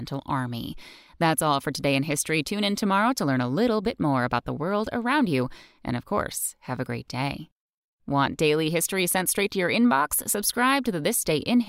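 No technical faults can be heard anywhere in the recording.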